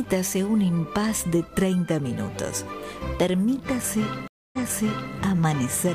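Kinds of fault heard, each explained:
Stream reconnect: after 254 ms of silence the audio fades back in 0.6 s earlier, replaying material, which a plain dropout, never jumping backward, would not do.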